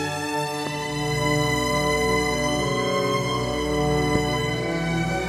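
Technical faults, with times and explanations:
0.67–0.69 s and 4.15–4.18 s, loud pop: two single, sharp pops sit on top of the sound, which carries on unbroken beneath them. The first peaks about 10 dB above the surrounding level and the second about 15 dB, each lasting roughly 20 ms. The likely cause is a brief voltage step or spike, from a switch, connector, static discharge or driver glitch, entering the chain. The following circuitry shapes that step into a short pulse heard as a pop.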